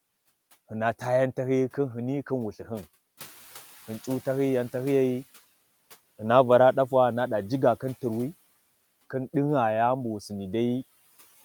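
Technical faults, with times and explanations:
3.17–5.32 s, noise suppressor catching up: the room noise jumps by about 13 dB at around 3 s to about 23 dB below the speech, and for the next 2.15 s it comes through with less reduction than before, because the suppressor's noise estimate was still set for the quieter background. As the estimate adapts, the noise sinks by about 10 dB, so the noise fades back after the sudden rise.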